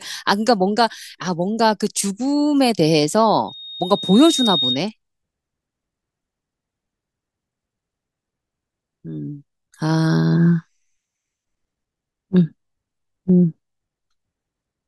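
Speech with loudspeaker feedback squeal from 3.47 to 4.82 s: a single 3.7 kHz tone swells over about a second to roughly speech level, the microphone re-amplifying its own loudspeaker. Unlike a steady interfering whistle, it grows by itself.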